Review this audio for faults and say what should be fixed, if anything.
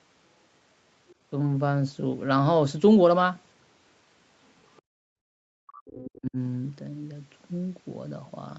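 Other side's voice leaking through, faintly, at 1.09 to 1.15 s and again at 4.66 to 4.82 s, sitting far below the talker's level. These are short scraps of a second voice rather than a reflection of the talker's own sound, which separates them from room reverberation. The likely cause is loudspeaker playback reaching the microphone and the echo canceller leaving a residue. Better acoustic isolation or a headset, plus a stronger residual-echo stage, would prevent it.

Background gated by the echo canceller from 4.82 to 5.28 s, directly after the second leak. The room sound falls away by about 40 dB for roughly half a second and then returns. Unlike a network dropout, nothing is lost or garbled. Only the background vanishes, because the canceller clamped the microphone while the loudspeaker was active. Comfort noise during suppression would prevent the audible hole.

Speech suppressed in double talk from 5.56 to 6.37 s, where the talker's own voice dips deeply, by around 40 dB at worst, in pieces over most of that span. 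Gating hits only the background in silence. Here live speech is attacked, which points to the echo canceller treating overlapping talk as echo. Better double-talk detection, with gentler suppression when near-end speech is present, would prevent it. The 8 kHz upper limit across the whole clip comes from the call path and is expected.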